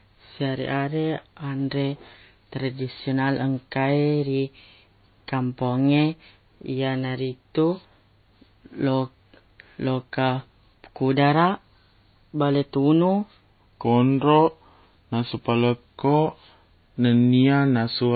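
Low-bitrate audio saved at a high bitrate affects the whole of this speech recording. Nothing above 4.5 kHz survives, and the leftover coding artefacts fit a likely chain in which a very low-bitrate MP3 of around 24 kbit/s was re-encoded as a 192 kbit/s MP3. The larger file cannot restore the band or detail the first pass discarded. A section at the wrong speed runs from 13.84 s to the end at 18.16 s, playing at 0.854 times normal speed, so the speech turns slower and deeper, about three semitones lower. The likely cause is an editor or player resampling that stretch against the wrong clock.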